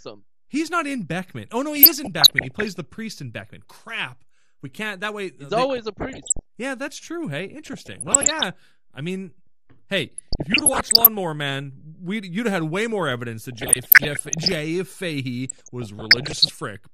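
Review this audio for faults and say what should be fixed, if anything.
MP2 compression runs throughout this speech: dull, gurgling, granular top end from switched-off upper sub-bands, likely from a low Layer II rate around 80 kbps. The damage is steady, unlike burbling. Raise the bitrate or use a more efficient codec.

DAB burbling appears at 1.76–2.76 s (before "the priest in"), 5.70–6.41 s, 7.66–8.43 s (before "I mean hey"), 10.18–11.07 s (after "I mean hey"), 13.52–14.52 s and 15.49–16.50 s. Bit errors of around 0.5 to 1 percent corrupt sub-band values, producing noise blips that come in bursts rather than the constant dullness of compression. Improve reception or add stronger error protection.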